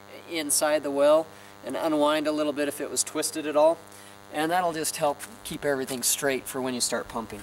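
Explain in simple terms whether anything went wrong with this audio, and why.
A steady, thin buzz runs underneath the sound from start to finish. This is DECT cordless phone buzz: a nearby cordless phone or its base sends a short radio burst 100 times a second, and the audio equipment picked it up as sound.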